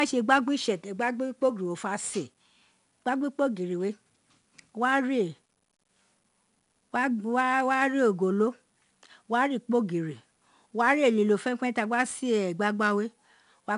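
Speech carries a gritty hiss that rises with each loud syllable and nothing above 10.6 kHz throughout, the sound of 4-bit ADPCM compression, which fits a rate near 88 kbps.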